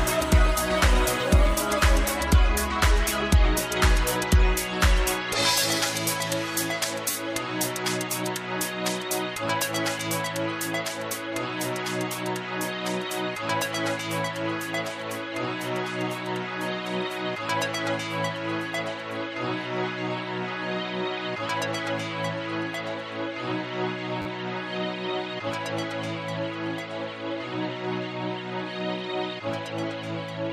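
At 7.11 s and again at 24.22 s there's a repeated buffer: new audio ran late, so the same 10 ms chunk played four extra times. Each one lasts about 40 ms and comes across as a quick buzzy stutter with hard joins, and nothing seems skipped.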